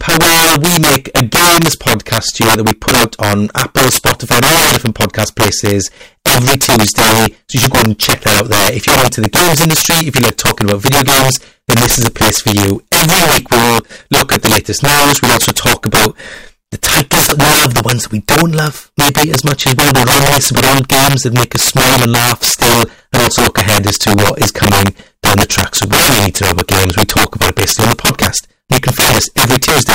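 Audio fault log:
Throughout, integer overflow: the signal is driven about 14 dB past the largest value the integer format can hold, and nothing limits it. Instead of flattening at the ceiling, each excess peak wraps around to the opposite extreme, leaping across the full range in a single sample. Roughly one sample in fourteen goes over, so every loud moment erupts into harsh, violent cracks, far sharper and more broken than ordinary clipping.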